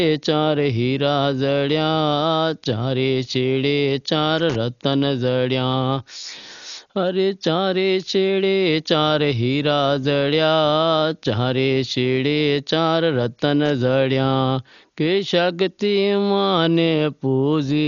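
From the start, the speech is dull and muffled, with nothing above about 6.9 kHz and a rough, fluttery hiss around voiced sounds. That's likely heavy Dolby Digital compression, which fits a starved bitrate of around 40 kbps, where the encoder drops many frequency lines and the decoder fills them with noise.

At 4.38 to 4.56 s, and again briefly at 13.66 to 13.70 s, there's a scratchy burst of loose connector crackle, the kind you get when a worn contact keeps making and breaking, chopping the signal into irregular crackle.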